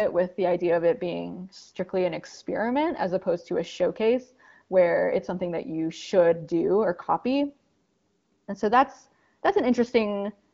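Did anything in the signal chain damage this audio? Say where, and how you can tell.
No, nothing in the signal chain stood out as damaging this speech on listening.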